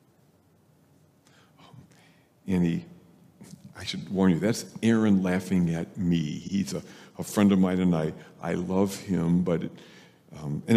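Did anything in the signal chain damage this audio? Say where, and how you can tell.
Yes. At 6.47 to 6.52 s a 52 ms slice of the audio plays twice in a row, a short stutter. This is repeated frames at the codec or storage stage: a run of compressed frames was written or sent again, and the length fits two frames. Unlike a dropout, nothing goes missing; the clip simply runs 52 ms long.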